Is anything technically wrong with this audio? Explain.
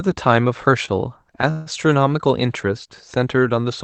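Yes. Two playback hiccups interrupt this speech.

From 0.85 to 0.90 s there is a short stall from a late packet: the jitter buffer briefly ran dry, so the receiver stretched the last sound by about 26 ms, then resumed at the same point. It comes across as one slightly held instant with a slight buzz or dip.

From 1.51 to 1.68 s comes a call audio freeze. For about 153 ms the last sound is drawn out into a fading buzz or hiss that never drops to silence, and then the speech carries on from where it stopped. The likely cause is packets held up in transit that emptied the jitter buffer. It is longer than the stall, but nothing is lost; the speech is only pushed later.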